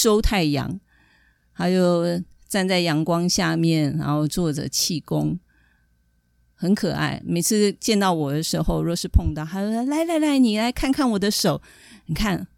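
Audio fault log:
1.65, 4.80, 9.74 and 11.40 s: dropped samples. Each is a single sharp, dry click with no gap in the speech, a thin vertical line in the spectrum. A few samples are likely missing at each point, well under a millisecond, so the waveform jumps abruptly to a later value.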